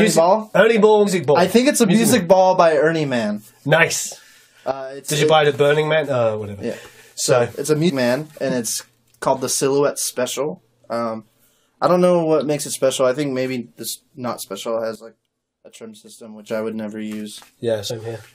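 Compressed frames skipped at 1.06 s, 7.88 to 7.91 s and 17.9 s: the audio jumps ahead by roughly 150 ms at the first two points and about 50 ms at the last. That fits whole 23.2 ms frames going unplayed, about seven and then two. A sudden gain jump drops the level by about 15 dB from 4.71 to 5.09 s and by about 12 dB from 14.95 to 16.49 s. Sound and background noise fall together, most likely from a digital gain step applied without a ramp.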